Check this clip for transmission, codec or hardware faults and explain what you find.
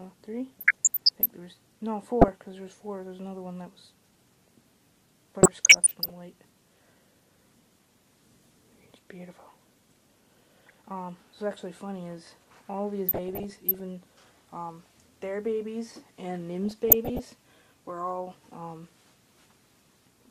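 DAB burbling appears six times: 0.48–1.26 s, 2.21–2.28 s, 5.42–6.10 s, 10.49–10.74 s, 13.08–13.80 s and 16.65–17.24 s. Weak reception lets bit errors past error correction, corrupting MP2 samples, which puts short noise blips into single sub-bands, and scale factors, which make sub-bands jump in level for up to a frame, giving burbling blips over the sound.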